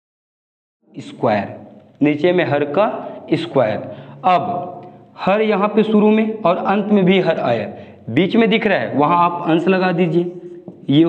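No technical faults present; the level rises in a smooth fade-in from about 1 s to 1.31 s, with no click or hard edge.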